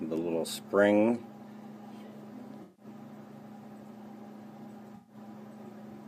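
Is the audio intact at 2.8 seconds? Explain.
No. AAC frame loss with concealment runs from 2.63 to 2.85 s, so the audio at 2.8 s is not intact. Roughly 0.15 s of coded data never reached the decoder, which points to a run of several consecutive AAC frames going missing. The decoder covered the gap by reusing the last good spectrum with scrambled signs or interpolated energy, so the moment sounds like a smeared, noisy or phasey patch.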